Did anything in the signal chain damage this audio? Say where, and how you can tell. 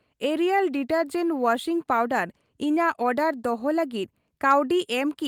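No, nothing in the signal chain has damaged this speech recording. No stage from capture through to playback has left a mark that can be heard.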